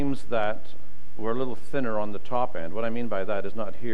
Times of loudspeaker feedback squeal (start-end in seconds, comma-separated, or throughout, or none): none